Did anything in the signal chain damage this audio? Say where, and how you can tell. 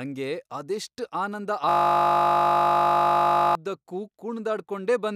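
Yes. A system hang loop at the driver or buffer stage: the host froze while the hardware kept replaying one 20 ms ring buffer. Just after "ಅದೆಷ್ಟ್ ಆನಂದ", from 1.69 to 3.55 s, the speech becomes a steady 50 Hz buzz as that slice repeats about ninety times.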